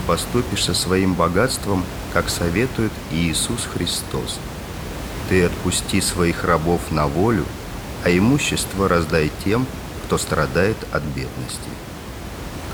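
No technical faults are audible anywhere in this clip.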